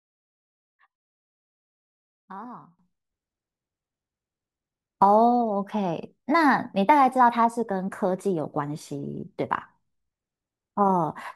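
From the start to 2.79 s the speech drops by about 20 dB and turns faint, with the centre nearly gone. One channel inverted is the likely cause: with reversed polarity, the shared centred content cancels on mono summing.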